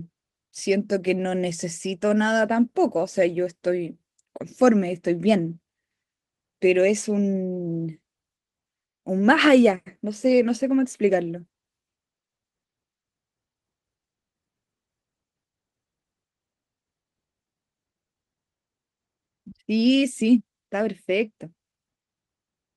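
Speech recording with no audible technical faults anywhere.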